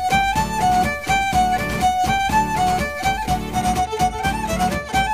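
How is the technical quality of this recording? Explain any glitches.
Poor for the first part. From 0.0 to 3.59 s, the audio was likely truncated to about 6 bits without dither, so a grainy distortion roughly 30 dB below the signal tracks the sound and roughens its quiet parts.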